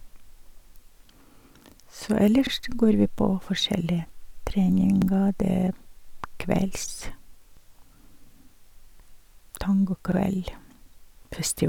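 The speech was handled in 2.5 s chunks that overlap at each join: every new chunk begins 50 ms before the previous one finished, so those 50 ms are played twice. This is the overlapping chunks fault, and it repeats at a steady rhythm, at 2.47–2.52 s, 5.02–5.07 s, 7.57–7.62 s and 10.12–10.17 s. At each join the doubled fragment is heard as a brief stutter or click.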